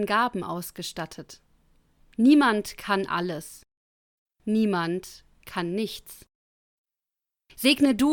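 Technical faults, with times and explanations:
Nothing stood out as a technical fault on listening to the recording.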